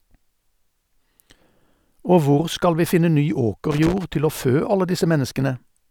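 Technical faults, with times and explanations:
3.71–4.04 s, loose connector crackle: a worn or dirty contact in the signal path is making and breaking as it shifts, chopping the speech on and off for about a third of a second, while any DC on the line turns each break into a pop, giving an irregular scratchy burst.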